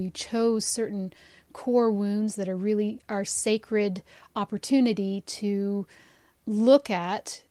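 The speech recording shows no technical faults at any point in the signal.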